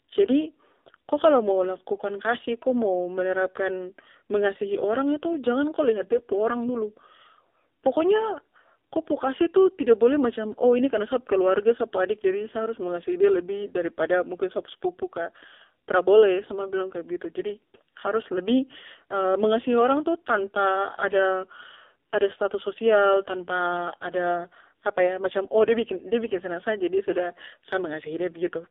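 From start to finish the speech carries the sound of the AMR narrowband mobile codec. The band is confined to roughly 300 Hz to 3.6 kHz, so there is no low body and no air or sibilance above the telephone band. The codec rebuilds the voice from a vocal-tract model excited by sparse pulses, and at this coding depth the result is heavily buzzy and synthetic, which fits a low mode around 5.9 kbps.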